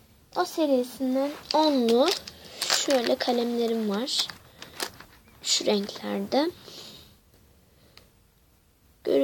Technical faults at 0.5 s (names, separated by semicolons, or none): none